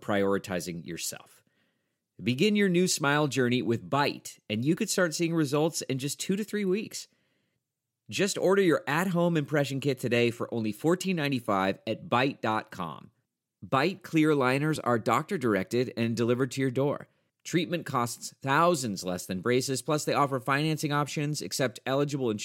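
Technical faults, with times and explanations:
4.77 s, audio missing between chunks: a very short piece of the speech, roughly 15 ms, drops out and the sound on either side is butted together with no gap of silence, so the flow jumps forward for an instant. This is likely the recorder or processor handling the audio in 10-second blocks and losing a sliver while closing one block and starting the next.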